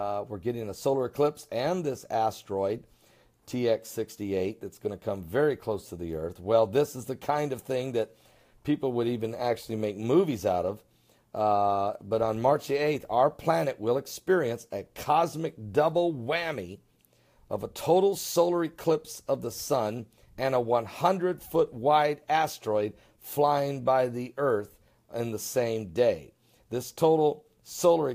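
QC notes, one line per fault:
No faults found on this pass; nothing to log.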